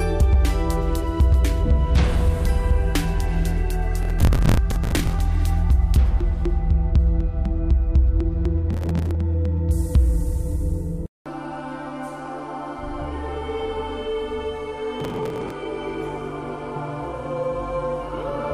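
Processor overload crackle hits at 4.02–5.19 s, 8.73–9.15 s and 15.00–15.52 s. Short buffers, around 10 ms each, miss their deadlines, and stale audio is replayed, giving a gritty tearing. The waveform shows hard-edged repeated chunks, and the spectrogram shows dense vertical broadband streaks.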